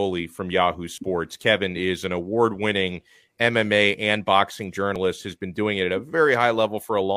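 At 0.98 to 1.01 s and 4.96 to 4.98 s, overlap between stream segments trims genuine speech at 4 s boundaries, producing brief skips where the waveform jumps.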